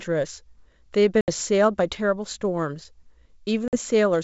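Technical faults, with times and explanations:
1.21 to 1.30 s and 3.68 to 3.77 s, packet loss on an ADPCM call: the G.722 wideband speech drops into hard-edged silence, about 70 ms of audio missing in the first gap and 50 ms in the second, which points to a handful of short packets lost each time. When the sound resumes, the receiver's adaptive predictor and step size no longer match the sender's. The speech comes back slightly distorted, then settles within some tens of milliseconds.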